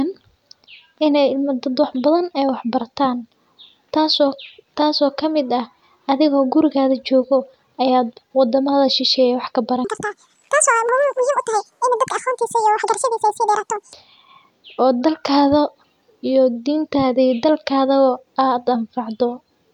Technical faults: section at the wrong speed

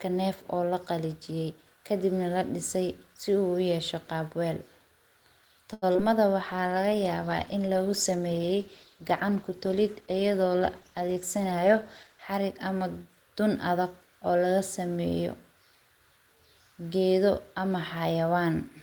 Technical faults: short stall from a late packet; short concealed packet loss; call bitrate drop; jitter buffer speed-up

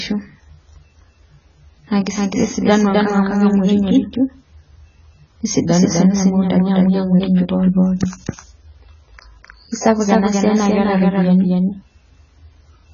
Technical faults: doubled audio track; AAC compression

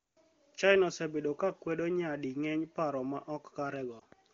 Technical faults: lost AMR speech frames

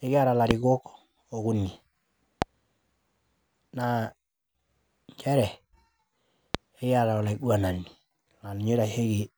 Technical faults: loud pop

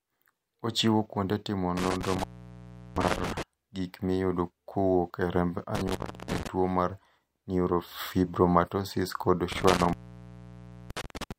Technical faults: intermittent contact

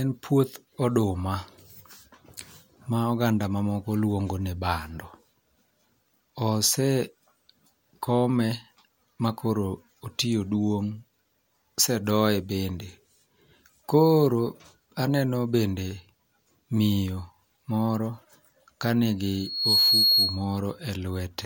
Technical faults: loudspeaker feedback squeal

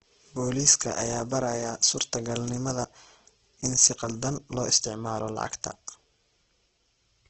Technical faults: Opus compression

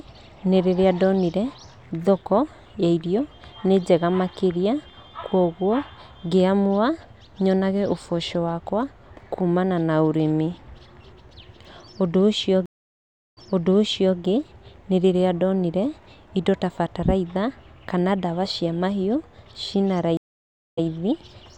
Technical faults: stream reconnect

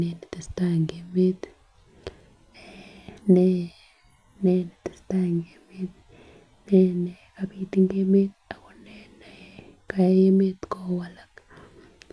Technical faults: none

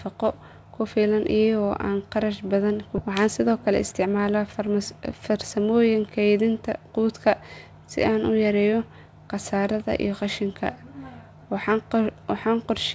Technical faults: skip ahead; jitter buffer speed-up

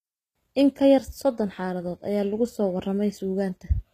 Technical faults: HE-AAC compression

